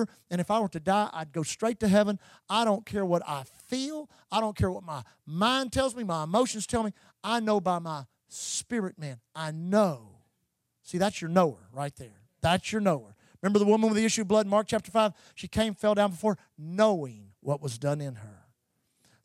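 Listening through the speech recording, nothing stood out as a technical problem at any point.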